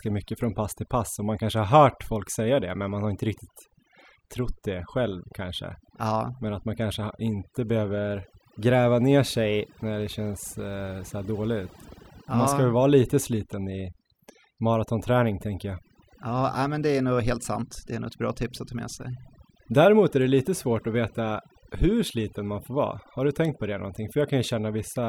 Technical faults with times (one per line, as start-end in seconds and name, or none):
0.00-25.09 overdone noise removal